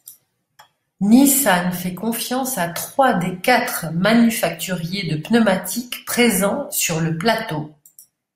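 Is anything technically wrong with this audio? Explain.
Yes. Throughout the speech there is a buzz at 100 Hz that is heard only while sound is present. This comes from a resampler restarted on every block: each 10 ms block was converted in isolation, leaving a small error at every edge.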